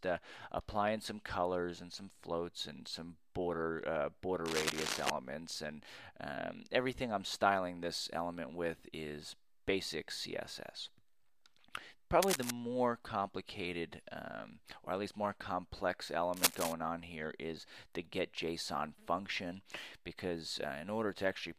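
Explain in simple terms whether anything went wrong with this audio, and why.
Cable scratch noise, at 4.45 to 5.10 s, 12.22 to 12.51 s and 16.34 to 16.73 s: brief bursts of scratchy rustling, about as loud as the sound itself and louder at 16.34 s. Likely a worn cable or connector being moved, its flickering contact adding noise.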